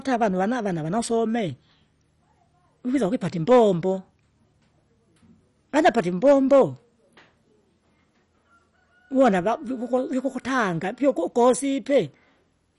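Speech throughout, and the whole thing sounds dull and gurgly, with nothing above about 11.3 kHz and a grainy, flickering texture in what's left. That's most likely MP2 compression starved of bits, which fits a rate around 48 kbps. Upper sub-bands get switched off and the remaining ones are coarsely quantised. There's also hard clipping, with peaks flattened into harsh crackle at 3.51–3.61 s (just after "vikwisa wipata", about 4 dB over), 5.77–6.61 s (about 6 dB, the roughest), 9.20–9.28 s (about 3 dB, right before "va vikukwa") and 11.09–11.45 s (about 1 dB, mild).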